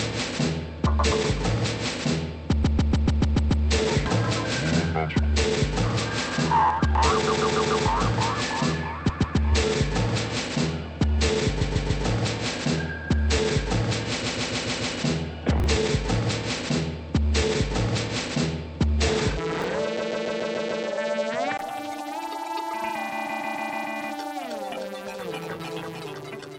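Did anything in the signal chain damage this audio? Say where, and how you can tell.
Yes. From the start to 21.59 s the sound is dull and boxy, with nothing above 8.2 kHz. At 21.59 s there is a 20 ms gap, and then the full top end returns. The level holds steady across the join. The hiss floor during the dull stretch sits about 55 dB under the signal. This points to the input stage. The likely cause is an input switched to a poorer device, such as a headset's call profile, which was then switched back.

Repeated frames show up as stutters at seven points: 2.63–3.64 s, 7.26–7.84 s, 9.09–9.37 s, 11.61–12.04 s, 14.22–14.94 s, 19.98–20.85 s and 23.29–23.87 s. Each one loops the same 144 ms block, which fits a run of six compressed frames. The block plays two to seven extra times. This is a codec or storage fault. Frames were written or sent more than once, so the decoder replays them. Each stutter lengthens the audio, by up to about 1 s.

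Chunks out of order cause two brief garbled moments, at 15.60–15.66 s and 19.60–19.64 s. The sound jumps oddly at the hard joins. Both fit 20 ms chunks. In the first, a chunk arrives two places late. In the second, one arrives a single place late. Nothing is missing, but the playback order is wrong. That points to network or buffer handling that didn't reorder late packets before playout.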